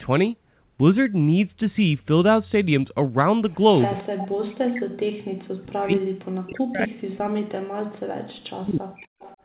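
A speech recording with two call faults. An echo leak appears at 3.82–4.04 s and again at 9.19–9.37 s as a faint delayed copy of the talker, about 25 dB down and trailing by 253 ms. The likely cause is a loudspeaker echo canceller on the far side letting residual pickup back into the call. Speech is suppressed in double talk at 4.1–4.84 s and 5.36–9.05 s, where the voice dips sharply, by around 40 dB at worst. This likely comes from the echo canceller treating overlapping speech as echo and attenuating it. Throughout, the audio stays within the narrow 4 kHz band of the call path.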